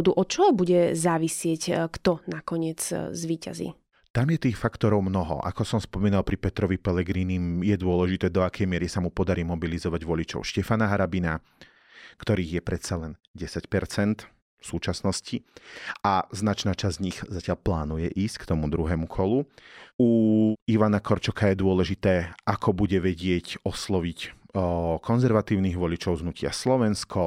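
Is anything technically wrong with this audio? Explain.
No, there are no technical faults.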